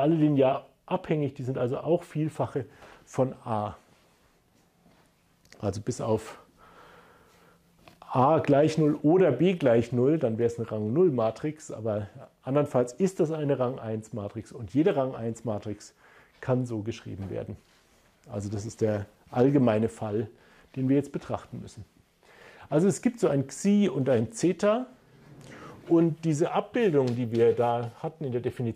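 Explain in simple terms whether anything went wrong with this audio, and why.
Nothing went wrong here.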